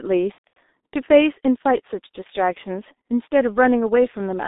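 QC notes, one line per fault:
Throughout: G.723.1 codec at 6.3 kbit/s, heavy damage. The band is held to roughly 250 Hz to 3.7 kHz, and the coarse 30 ms frames with a slowly updated voice model leave the speech muffled and hoarse, with smeared consonants.
0.32–0.57 s: VoIP packet loss concealed by the speech codec. About 210 ms goes missing across 240 ms, which fits seven lost 30 ms frames. The longest gap is 120 ms. The decoder stretches its last pitch and filter into a fading buzzy tone or coloured noise.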